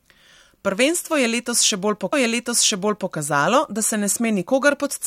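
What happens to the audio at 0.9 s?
Nothing goes wrong at 0.9 s; the speech carries on intact through that moment, with no dropout, click, distortion or other fault.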